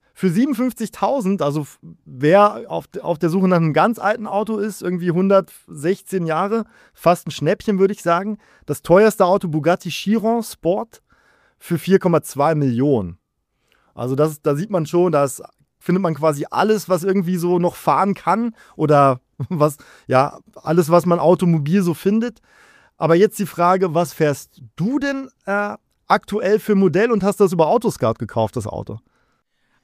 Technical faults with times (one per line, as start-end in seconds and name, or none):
none